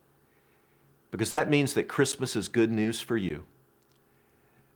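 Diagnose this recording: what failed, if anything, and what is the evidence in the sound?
Network, burst of packet loss at 1.31–1.39 s, before "means that": about 60 ms of concealment fades into a smeared band, then 60 ms of audio is missing.

Driver or buffer, block of digital silence at 2.12 s (between "means that" and "is good") and at 3.29 s: 10 and 15 ms silent waveform gaps.

Network, short concealed packet loss at 2.83–2.87 s, after "is good": 20 ms is filled with extrapolated sound, showing as a brief spectral smear, and 20 ms is skipped.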